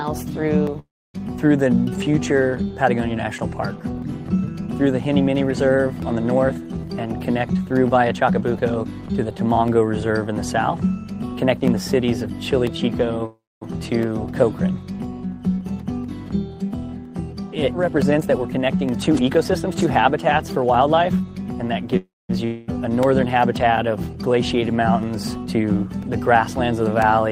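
Regular ticks run through the audio once every 1.0 s, from 0.67 s to 27.02 s. Each is a periodic USB or driver dropout of about a millisecond of silence, around thirty in all. At 0.79 to 1.16 s, 13.26 to 13.63 s and 21.97 to 22.31 s, the sound stretches into a fading buzz for roughly 0.32 to 0.36 s. It then falls silent for the last 0.2 to 0.3 s before resuming with nothing skipped, likely a call audio freeze each time. Between 6.44 and 8.84 s the audio plays at 114% speed, and between 17.88 and 21.24 s at 111%, with unchanged pitch. That is jitter buffer speed-up, cutting roughly 0.3 s and 0.4 s of delay. At 22.45 to 22.73 s a similar fading fill covers what is likely a long network dropout, and about 220 ms of audio is lost before playback resumes further on.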